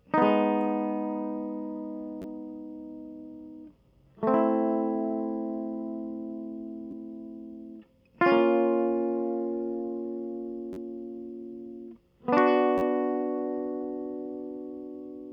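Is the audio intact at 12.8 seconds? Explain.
No, there's a repeated buffer from 12.78 to 12.82 s: a roughly 10.7 ms chunk of the music, fitting a 512-sample buffer, replays four extra times, giving a brief buzzy stutter.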